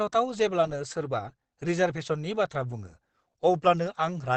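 It's a short speech clip with plainly audible Opus compression all the way through: muffled and hoarse, with nothing above about 8.9 kHz. That points to a wideband encode, likely Opus in its SILK speech mode at a low rate around 16 kbps.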